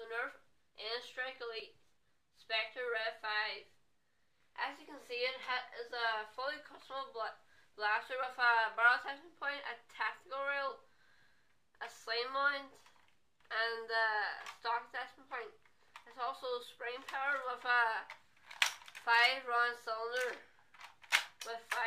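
Imaging from linear upsampling runs the whole way through. Straight-line interpolation up from what sounds like a 22 kHz source dulls the top and leaves faint mirror images, about 30 dB down, from 11 to 22 kHz.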